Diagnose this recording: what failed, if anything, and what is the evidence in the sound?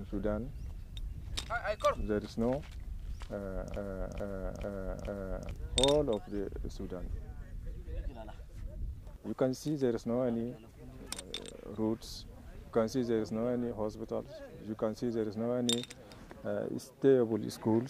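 The playback or streaming stage most likely stalled and kept re-sending the last fragment it held, producing a broken-record loop. From 3.76 s to 5.51 s, a 437 ms piece of sound repeats four times back to back, each pass identical, with no variation between repeats. Whatever audio belonged in those 1.75 s never arrives; when the loop releases at 5.51 s, the sound resumes further along rather than where the stall began.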